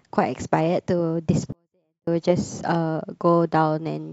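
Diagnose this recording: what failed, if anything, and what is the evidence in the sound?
A sample-format conversion fault. From 1.52 to 2.07 s the speech stays clean but falls about 48 dB at once, nearly inaudible. This is a 24-bit alignment error (too quiet). Low-aligned 24-bit samples were read as full 32-bit values, losing eight bits of gain.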